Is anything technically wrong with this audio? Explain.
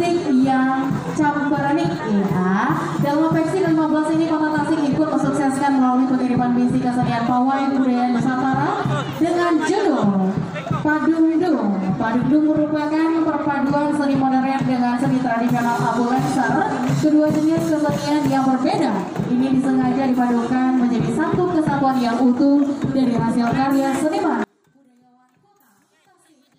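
Yes. One channel inverted, from 24.44 s to the end at 26.59 s: the level drops by about 38 dB, and what remains is a faint trace rather than the full sound. This is likely one stereo channel with reversed polarity being summed to mono. Everything common to left and right cancels, including the centred content, leaving only the small difference between the channels.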